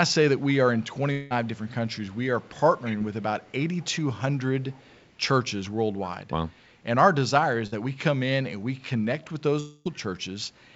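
Speech heard through a call path whose top end stops at 8 kHz, which fits G.722 at 64 kbps. Echo leak is heard at 0.39 to 0.44 s, from 0.79 to 3.93 s and from 4.61 to 5.09 s: a faint copy of the talk trails it by 229 ms, about 35 dB down in the short first and last stretches and rising to about 20 dB down in the long middle one. The likely cause is a far end on a loudspeaker whose echo canceller let part of its microphone pickup slip back into the call. Long network dropout hits from 1.12 to 1.32 s and from 9.60 to 9.87 s, probably because no packets arrived for those spans. The receiver bridged both gaps by stretching the last sound into a fading buzz or hiss, so neither goes fully silent. About 180 ms and 260 ms of real audio are gone, and the speech picks up again further along with that part missing. Short concealed packet loss appears at 2.98 to 3.02 s, where 20 ms never reached the decoder in time. 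The decoder continued the preceding sound to cover the hole and blended back, leaving a brief smear or wobble, and a quick consonant there may vanish. A burst of packet loss at 7.66 to 7.74 s removes about 60 ms. The receiver held the last sound and turned it down across the gap, giving a short held buzz or fading hiss before the audio resumes past the missing piece.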